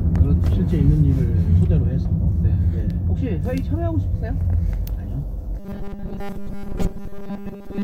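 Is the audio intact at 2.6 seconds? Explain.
Yes, at 2.6 seconds the audio is intact, with no dropout, click, distortion or other fault at that moment.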